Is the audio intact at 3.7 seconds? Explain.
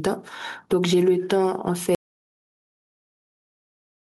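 No. At 3.7 s the clip sits inside an audio dropout to silence. It runs from 1.95 s to the very end. The sound does not fade out. It stops abruptly, and what follows is silence, with no room tone at all. That points to a lost input. The likely cause is a disconnected device, a failed link or a stray mute while the recorder kept writing silence. Whatever was spoken in that stretch is gone.

Gain pumping also runs through the whole clip, with the level swinging by about 10 dB. That suggests input gain set far too high, with a fast limiter or compressor clamping down on every peak. The likely result is speech that sounds squashed and close in level throughout. At 3.7 s itself, though, there is only silence to hear.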